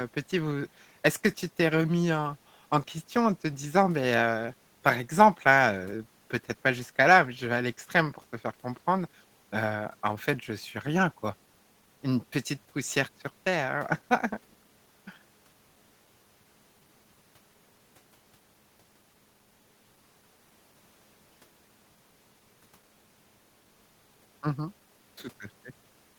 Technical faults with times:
none

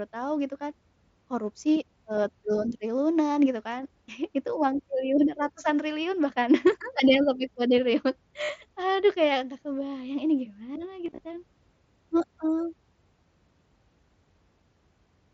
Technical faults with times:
8.44-8.49 concealed Bluetooth headset packet loss
11.05-11.20 concealed Bluetooth headset packet loss

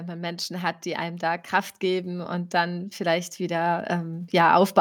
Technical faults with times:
0.47-4.75 automatic gain rising

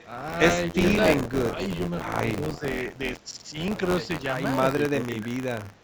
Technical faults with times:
0.00-5.84 buffer tearing
0.00-0.07 echo leak
0.67-0.82 speech suppressed in double talk
0.98-1.04 echo leak
1.08-1.56 speech suppressed in double talk
2.29-2.63 speech suppressed in double talk
4.90-5.41 speech suppressed in double talk
5.77-5.84 echo leak

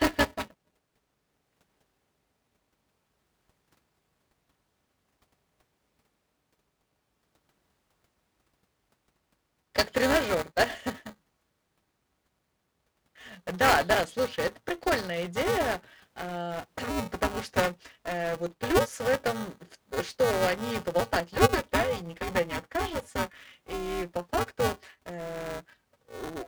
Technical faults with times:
0.00-26.48 buffer tearing

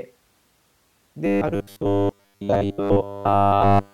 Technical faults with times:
1.26-3.93 robotic sound from repeated short buffers

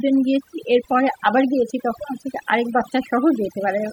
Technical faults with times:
0.00-3.92 overdone noise removal

